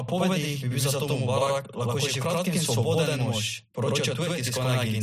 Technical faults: channel delay (doubling)

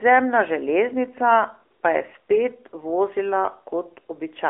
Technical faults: AMR narrowband mobile codec

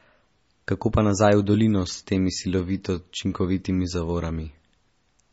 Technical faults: MP3 compression

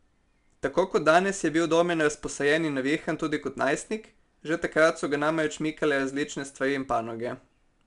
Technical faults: 4-bit ADPCM compression

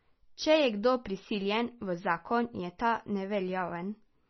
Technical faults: MP3 compression

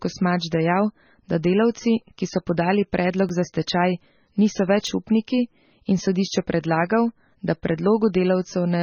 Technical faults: MP3 compression; repeated buffer

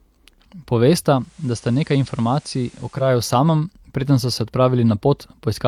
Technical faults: digital radio blending to analogue

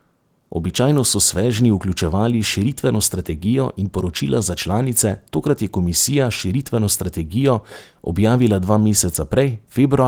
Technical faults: none

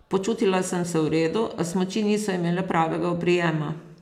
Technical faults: none

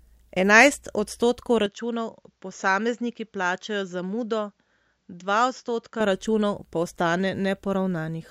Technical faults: input switched to a poorer device

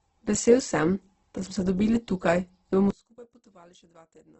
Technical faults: Opus compression; one channel inverted

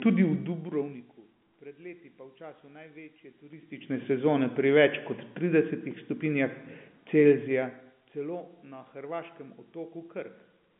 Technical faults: zipper noise

